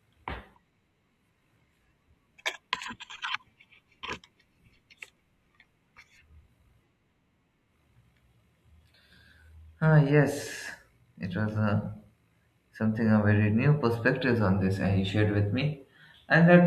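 No technical faults can be heard anywhere in this speech recording. There is nothing to point to at any moment along the way.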